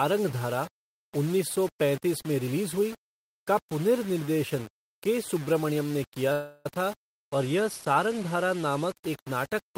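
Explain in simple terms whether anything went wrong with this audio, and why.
Two things went wrong. The speech sounds grainy and gritty the whole way through, roughest in the quieter moments, because the grit follows the voice. That's low bit depth without dither: the audio was likely stored with only about 5 bits, rounded with nothing to smooth it.

From 6.32 to 6.79 s there's a call audio freeze. The last bit of sound stretches into a fading buzz for about a third of a second, then the speech picks up exactly where it stopped, likely because delayed packets left the receiver with nothing to play.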